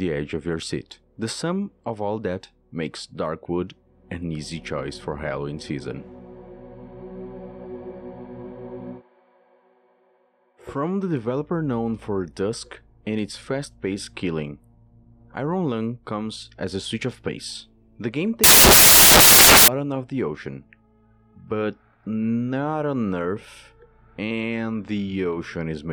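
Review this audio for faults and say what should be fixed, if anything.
From 18.44 to 19.68 s, samples built from the wrong bytes: misassembled sample bytes turn low bits into loud, harsh broadband noise, showing as a tall waveform block and broadband spectrogram smear. Fix it by making the reader's byte order, offset and sample alignment match the stream's actual format.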